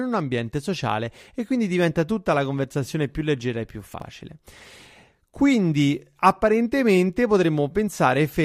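At 3.94 to 4.02 s, just after "più leggera e più", the speech briefly jumbles. This is chunks out of order: a 20 ms chunk plays three chunks late, so nothing is lost, but the sequence breaks at three hard joins.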